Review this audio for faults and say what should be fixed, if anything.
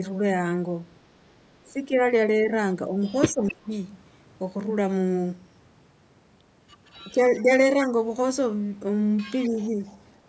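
Speech suppressed in double talk appears at 1.68 to 3.71 s, 7.13 to 7.94 s and 9.48 to 9.78 s. The speech dips, by about 15 dB at worst in the first stretch. Likely cause: the echo canceller could not separate near and far talk, so it turned both down. A better double-talk detector in the canceller would prevent this.

An echo leak is heard at 3.48 to 3.52 s, 6.93 to 7.04 s and 9.45 to 9.97 s. A copy of the speech returns 258 ms late. It is about 15 dB below the speech at first, then much fainter. A loudspeaker's echo likely escaped the far end's canceller. Better echo cancellation there, or a headset, would stop it.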